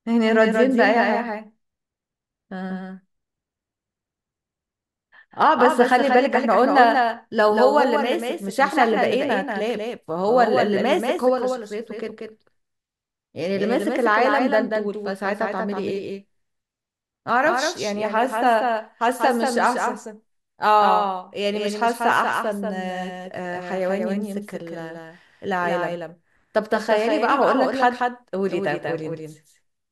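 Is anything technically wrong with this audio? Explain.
Yes. Throughout the speech, a doubled audio track: a full-band copy trails about a fifth of a second behind, a few dB quieter, likely from a second, slower capture path. Unlike a room echo, it has no decay or reverberant colouring.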